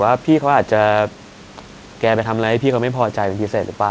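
No technical faults can be heard in the speech. Room noise sits about 26 dB below it, and the call path leaves nothing above 8 kHz, which fits a wideband call codec such as G.722.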